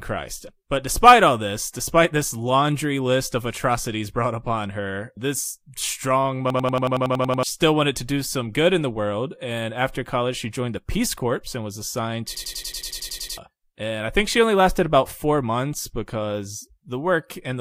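At 6.50 to 7.43 s and 12.35 to 13.38 s, a system hang loop replays one identical 93 ms slice of speech at 10.8 Hz, a machine-gun stutter that fits a 4096-sample buffer. The exact repetition, rather than dropouts or garbled fragments, gives it away. Each time, roughly a second of speech is lost.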